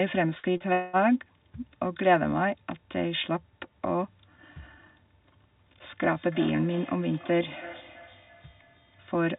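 Speech, carried over a narrowband call path with nothing above 4 kHz, that breaks up repeatedly in its first second. From 0.38 to 0.46 s a burst of packet loss removes about 60 ms of audio. The receiver spends about 50 ms of that extending the last sound and fading it, so it becomes a held buzz or a fading hiss, and the speech then jumps forward. Right after, two short concealed packet losses follow back to back, at 0.52 to 0.57 s and 0.57 to 0.63 s. Each drops about 30 ms, and 24 ms and 27 ms of it are filled with a continuation of the preceding sound that blends back in, heard as a quick smear or wobble that can swallow a consonant. At 0.73 to 0.96 s what is likely a long network dropout loses about 210 ms. Nearly all of it, about 205 ms, is filled with a decaying buzz or hiss rather than silence before the speech returns further on. Single clicks at 2.16 s and 7.18 s are likely dropped samples, where about one sample is missing and the waveform steps abruptly, leaving a thin vertical line in the spectrum. 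From 6.09 s to the end, a feedback echo between two devices sets in. A second device in the room replays the call and the microphone sends it back, so the speech returns roughly every 300 ms, at most about 18 dB below the direct speech, thinner and more ringing with each pass.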